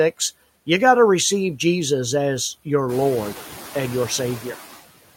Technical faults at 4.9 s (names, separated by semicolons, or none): noise suppressor artifacts